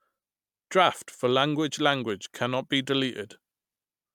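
Nothing stood out as a technical fault on listening to this speech recording.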